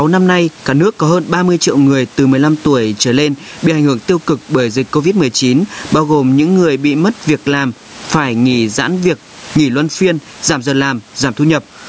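Across the whole recording the gain swings by around 15 dB, while loud and soft passages sit squashed close together. This is gain pumping, likely from the input gain set far too high with a fast limiter clawing it back. A noise gate would cut the background to silence in pauses; here the room noise stays in, sitting well below the speech.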